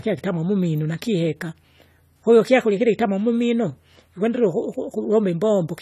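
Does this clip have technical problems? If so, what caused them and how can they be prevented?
Yes. Throughout the speech there is plainly audible codec damage. The sound is dull and smeared, with a warbling, fizzy texture on sibilants, and nothing survives above 14 kHz. This is likely AAC compression. The AAC-LC encoder, at a rate that points to about 32 kbps, quantises each frame's spectrum coarsely and discards high content. On a spectrogram this appears as a flat ceiling at 14 kHz with patchy holes and smeared blocks below it. Encoding at a higher bitrate or keeping a lossless master would prevent it.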